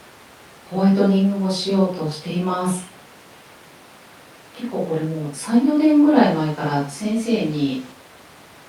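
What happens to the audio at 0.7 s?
Nothing goes wrong at 0.7 s; the speech there carries on intact, with no dropout, click or distortion.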